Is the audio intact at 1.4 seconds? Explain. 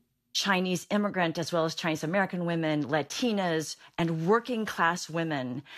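Yes, the speech at 1.4 seconds plays through intact, with no dropout, click, distortion or other fault at that moment.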